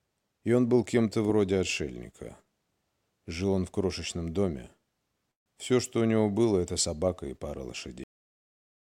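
At 5.31 to 5.48 s the audio halts, and this call audio freeze is likely a late packet burst draining the jitter buffer. The concealment fills about 145 ms, most of it silence, then playback resumes where it stopped, so nothing is lost and everything after sits 145 ms later. The clip then has a cut-off end at 8.04 s. The sound stops mid-event and falls straight to digital silence with no decay, because the final buffers were never written or played out.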